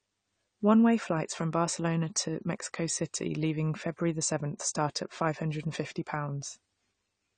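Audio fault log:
throughout: AAC compression. The speech is dull, with nothing above 9 kHz, and sibilants and held vowels carry a smeared, warbling, fizzy texture that is plainly audible. The likely cause is a low-bitrate AAC-LC encode, which fits roughly 32 kbps: the encoder lowered its cut-off to save bits and quantised the remaining frequency lines coarsely against its hearing model, so detail between bands is lost or swapped for substitute noise.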